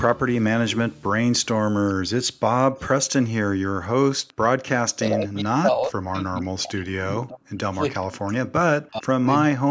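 At 0.91 to 1.03 s, 2.31 to 2.36 s and 4.20 to 4.38 s the room background is gated by the echo canceller. While far-end audio plays through the loudspeaker, the canceller clamps the microphone path hard, pulling the ambient bed down by about 40 dB. Each one sounds like a brief hole in the room tone, lasting from about 50 ms to 200 ms, before the background snaps back when the canceller releases.

From 4.96 to 7.68 s, 8.02 to 9.28 s and 9.49 to 9.70 s the speech itself is pulled down in irregular pieces by as much as roughly 40 dB. Across the first span about two seconds are affected, in the second about one, and the last is only a short clip at the very end. The likely cause is speech suppressed in double talk: with both ends active, the canceller cannot tell the local talker from loudspeaker echo and attenuates both, so the voice dips and breaks up. The call microphone processing leaves nothing above 8 kHz.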